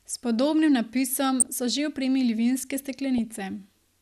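Across the whole speech clip there is a dull, gurgling graininess: the upper range keeps switching in and out and what remains sounds coarse. That is MP2 compression damage, most likely from MPEG Layer II coding short of bits, which fits a rate around 80 kbps. It differs from the burbling below because it is steady throughout. It comes from too few bits for every frame, not from corrupted data, so it never flares up as a sudden burst.

From 1.40 to 1.47 s, right after "podobnim napisom", and again from 3.18 to 3.34 s, after "opremili vinske", short bursts of burbling break over the speech. This is DAB burbling. A small share of bit errors slipped past error correction into the MP2 stream, and corrupted samples put short blips of noise into single sub-bands. Unlike a dropout from lost data, the sound does not go silent. It breaks into short noisy blips instead.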